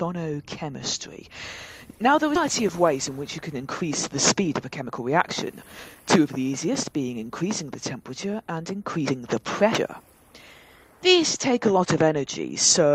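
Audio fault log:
2.35–2.37 s, skip ahead: the audio lurches forward with no gap or fill, as if a piece had vanished between one instant and the next. Roughly 0.4 s of sound was discarded while later audio was already queued, so the two sides join almost directly.
4.35–6.47 s, jitter buffer speed-up: this stretch plays hurried, about 9% fast, yet the pitch stays put. The receiver's buffer had overfilled, so it trimmed many tiny pitch-period slices in succession, around a fifth of a second in total, to bring the delay back down.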